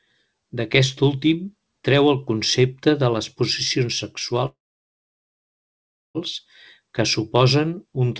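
From 4.46 to 6.18 s the speech freezes: a brief fading tail, then about 1.6 s of near-silence, likely a call audio freeze. Unlike a dropout, speech resumes exactly where it stopped, with nothing skipped.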